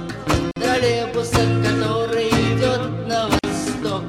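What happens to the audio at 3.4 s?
A gap at a join of encoded pieces: a gap of about 46 ms from 3.39 to 3.44 s, where untrimmed encoder padding remains, appearing as a flat, smeared-edged blank.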